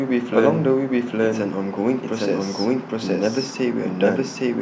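Speech with a doubled audio track the whole way through: a second full-band copy trails the original by roughly 0.7 s at about the same level, with no decay or room tone on it, most likely a second capture path or a misaligned edit stacking two copies.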